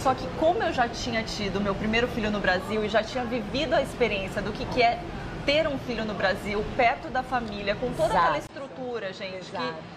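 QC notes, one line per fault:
8.47–9.96 s, input switched to a poorer device: after a brief gap of about 20 ms at 8.47 s, the sound runs to the end duller, with nothing above 9.1 kHz, a few dB quieter, and over a faint new background noise. The likely cause is the input moving to a narrower-band microphone. A codec bandwidth drop or low-pass filter would dull the top without the gap, the level step or the changed noise floor.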